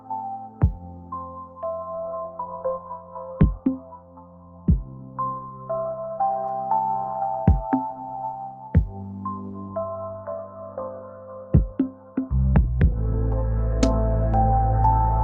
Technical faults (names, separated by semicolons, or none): noise suppressor applied to music or sounds; sound cut by the noise suppressor